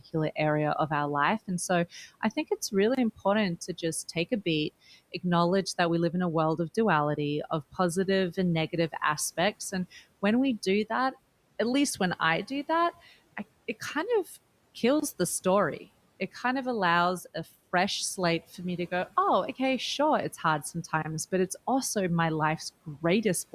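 The audio was delivered in 6-second chunks, and something at each join, likely a player starting the next chunk late or padding between them, leaves about 25 ms of silence. These gaps between chunks occur at 2.95 s, after "so I think it's" and before "important to just take"; at 8.97 s, after "and negative"; at 15.00 s; and at 21.02 s, between "okay sure it's hard" and "but it's also my". Each is a brief, hard-edged dropout, and even the faint room noise, about 24 dB below the speech, vanishes inside it.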